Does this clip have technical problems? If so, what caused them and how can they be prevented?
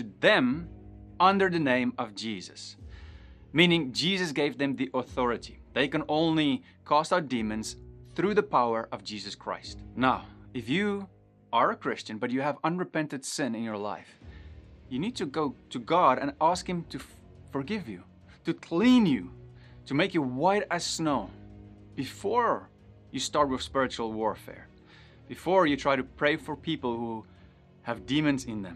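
Yes, there's MP2 compression damage throughout: a dull top end with gurgling, granular distortion, likely from Layer II dropping upper sub-bands at a low rate, around 80 kbps. Encoding at a higher bitrate, or skipping MP2 altogether, would prevent it.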